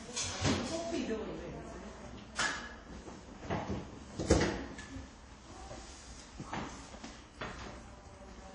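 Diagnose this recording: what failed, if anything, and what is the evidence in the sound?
The codec stage is where this went wrong, with damage plainly audible throughout. Nothing comes through above 10 kHz, and the sound rings and smears with a hiss that breathes along with it, likely WMA compression at a low rate, which fits roughly 32 kbps.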